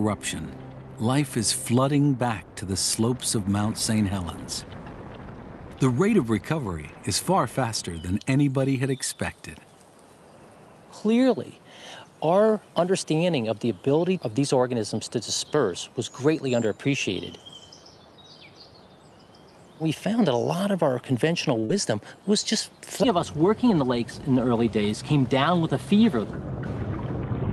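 At 21.59 s there's a short stall from a late packet: the jitter buffer ran dry, so the last sound is held for about 36 ms, with a slight buzz or dip, before carrying on with nothing lost. Right after, from 21.65 to 21.71 s, comes a short concealed packet loss: about 40 ms never arrived, and the receiver patched it by extending the preceding sound, leaving a brief smear or wobble. Then, from 23.63 to 24.07 s, there's a jitter buffer speed-up: the buffer had built up extra delay, so it trimmed tiny pitch-period slices, roughly 40 ms in total. That plays the sound about 7 percent fast at the same pitch, so it comes across as slightly hurried. All of this is on an Opus call path, which tops out around 12 kHz.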